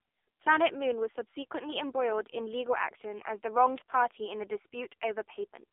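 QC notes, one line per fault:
Throughout: AMR narrowband mobile codec. The speech is squeezed into a phone-line band of roughly 300 Hz to 3.6 kHz, with nothing at all above 3.7 kHz, so it sounds boxy and dull. The codec damage is heavy. Voicing comes out buzzy and synthetic because the encoder rebuilds each 20 ms frame from a vocal-tract model and a handful of pulses. The harshness fits one of the low AMR-NB modes, around 5.9 kbps.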